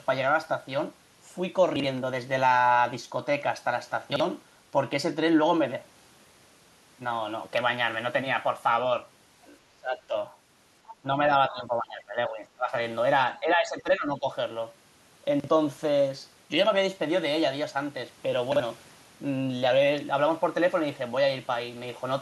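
Speech, with three kinds of fault. Chunks out of order: four times, at 1.76–1.84 s, 4.12–4.20 s, 15.40–15.48 s and 18.52–18.60 s, a 40 ms chunk plays one slot late, swapping places with its neighbour so each spot jumbles briefly. Speech suppressed in double talk: likely an echo canceller mistaking overlapping talk for echo and turning the talker down, causing dips at 9.44–9.56 s (about 10 dB), 9.80–10.15 s (about 20 dB), 11.03–11.08 s (about 5 dB), 11.48–12.73 s (about 15 dB) and 13.40–14.27 s (about 10 dB). Other side's voice leaking through: at 10.88–10.94 s, a brief scrap of a second voice, about 20 dB under the talker, likely loudspeaker pickup the echo canceller left behind.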